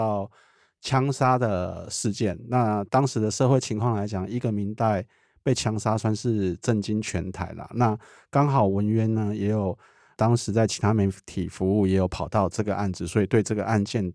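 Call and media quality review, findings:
Nothing stood out on listening to the speech recording; no findings to log.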